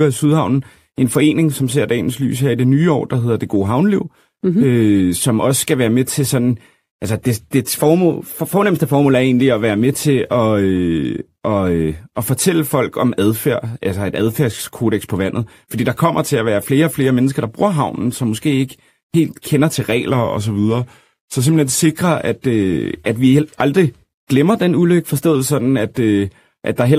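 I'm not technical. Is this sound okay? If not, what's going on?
No. From 20.09 to 21.98 s, just after "helt kender til", the speech suddenly slows by about 6 percent and drops in pitch by roughly a semitone. It snaps back to normal just before "at øh at". This is a drift correction step. Two devices were keeping time slightly differently. Software likely sped the playback down in one jump to keep them in step. That briefly detuned everything.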